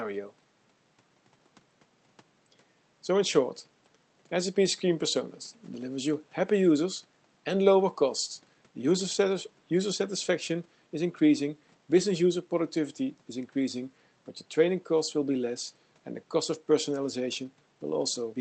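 No audible technical faults.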